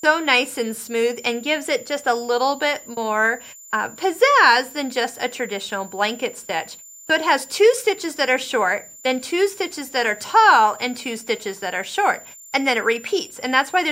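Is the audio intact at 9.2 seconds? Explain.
No, there's a switching supply whistle running through the whole clip, a thin tone wandering between 7.08 and 7.27 kHz, roughly 25 dB down, from a power supply cycling audibly.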